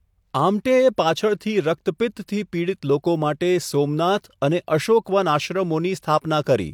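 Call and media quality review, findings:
Nothing to flag on this speech recording, so no findings to log.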